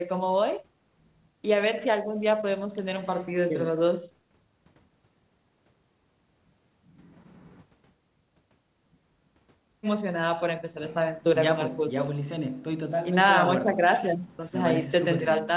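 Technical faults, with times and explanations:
No faults found: the speech is band-limited with nothing above 4 kHz, consistent with a G.711 mu-law call path after normal call microphone processing.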